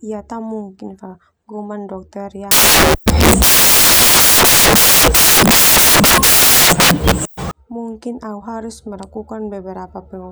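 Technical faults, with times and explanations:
2.51 to 7.51 s, samples built from the wrong bytes: for five seconds the speech turns into loud, harsh broadband noise, because each sample's bytes are being assembled wrongly, so the jittery low bits end up as the big part of the value. It clears just before "mungkin au harus".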